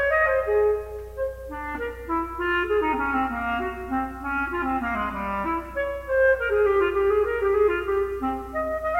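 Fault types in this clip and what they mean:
No technical faults can be heard anywhere in this clip. The sound continues steadily without any audible interruption or damage.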